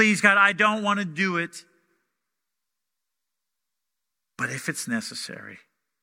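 No technical faults can be heard anywhere in this speech recording, and the signal holds steady throughout without any dropouts, glitches or distortion.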